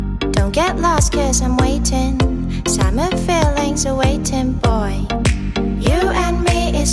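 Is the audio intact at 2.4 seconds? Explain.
Yes, the audio is intact at 2.4 seconds, with no dropout, click, distortion or other fault at that moment.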